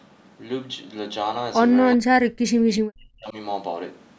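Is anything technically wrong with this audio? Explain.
Yes. From 1.96 to 3.35 s the speech sinks by as much as about 40 dB. That's speech suppressed in double talk: with both sides talking at once, the echo canceller likely mistook this talker for loudspeaker echo and turned it down.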